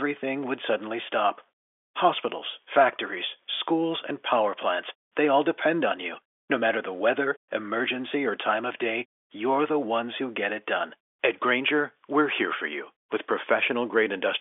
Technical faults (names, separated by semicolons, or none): none